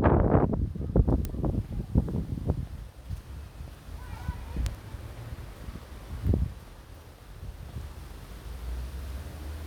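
A recording of everyday sound carrying two bit error spikes, sharp broadband ticks at 1.25 s and 4.66 s, each peaking around -14 dBFS. A flipped bit in memory or on a digital link throws one sample, then three consecutive samples, far off by a power of two before snapping back.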